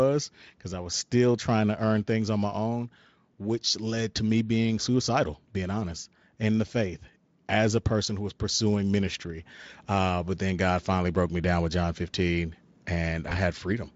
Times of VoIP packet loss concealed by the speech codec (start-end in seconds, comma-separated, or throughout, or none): 13.29-13.37